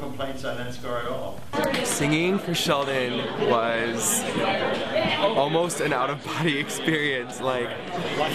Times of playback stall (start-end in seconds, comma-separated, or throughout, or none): none